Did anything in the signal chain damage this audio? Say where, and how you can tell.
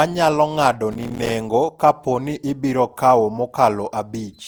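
Yes. Codec stage: the speech sounds swirly, smeared and hollow throughout, with blurred attacks, which likely points to generation loss from around seven repeated Opus passes near 64 kbit/s.

Driver or buffer stage: processor overload crackle from 0.92 to 1.31 s. Dozens of missed buffers of about 5 ms each, filled with silence, produce gritty tearing.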